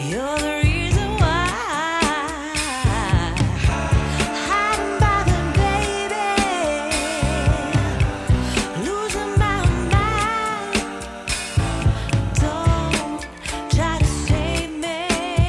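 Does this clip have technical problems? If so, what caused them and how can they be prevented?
No, this clip has no technical problems, so there is nothing to trace to a cause or prevent.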